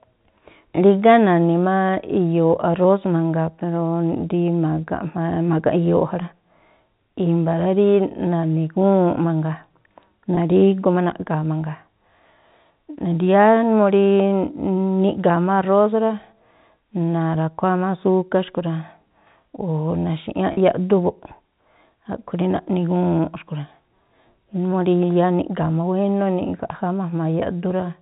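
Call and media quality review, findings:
Brief buzzy hold at 10.35–10.37 s, about 20 ms of audio missing, consistent with two lost packets. Probable component: receiver jitter buffer / loss concealment. Mechanism: packet loss with pitch repetition, repeating the last pitch period across the gap.

Longer held buzz at 20.53–20.57 s, about 40 ms missing, pointing to four lost packets. Same packet loss with pitch repetition concealment, looping the preceding pitch cycle. Both gaps sit in the G.711 mu-law telephone band, capped at 4 kHz.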